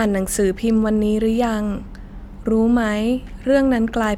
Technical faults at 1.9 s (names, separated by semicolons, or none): none